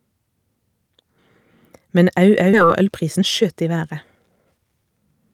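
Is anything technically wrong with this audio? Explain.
Yes. A skip ahead at 2.53–2.55 s drops about a second of speech, likely discarded when the jitter buffer overflowed, so playback jumps forward with no gap. From 2.63 to 4.66 s, a jitter buffer speed-up trims short pitch-period slices, about 0.3 s in total, to reduce delay. The speech runs at 114% speed without a change in pitch.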